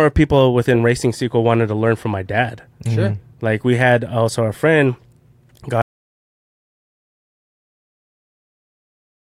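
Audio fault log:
5.82–9.27 s, audio dropout to silence: the speech stops mid-flow at 5.82 s and never comes back, so the last three and a half seconds or so are dead silence, with no room tone or hiss underneath. That flat nothing is the giveaway. The input most likely went away, say a loose connection, a dropped link or an accidental mute, while the recorder kept writing silence right to the end. Anything said after that point is simply gone.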